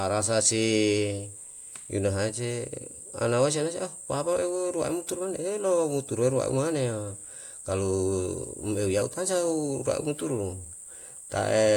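Nothing in this recording stands out as a technical fault; the audio simply runs along with no glitches to point to.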